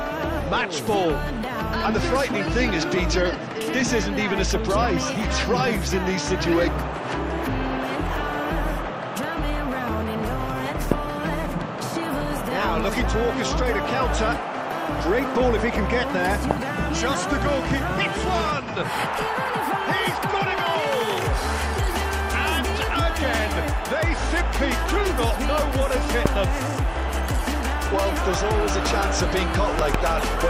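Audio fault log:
10.92–10.94, 16.51–16.53, 26.26–26.28 s: loud pop. Each is a single sharp pop peaking roughly 20 dB above the surrounding sound, which carries on beneath it. The likely cause is a brief voltage pulse such as a switch or static discharge. On the waveform it is a tall, narrow spike; on the spectrogram it is a thin vertical broadband stripe.
29.79–29.97 s: loud pop. Two pops in quick succession, each again about 20 dB above the sound, which continues underneath. The likely cause is a plug or contact making and breaking. On the waveform they appear as twin spikes; on the spectrogram they appear as two full-height vertical lines.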